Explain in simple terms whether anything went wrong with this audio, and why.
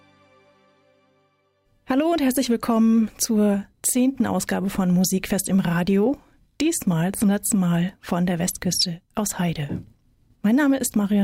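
Nothing went wrong here; the audio has no problems.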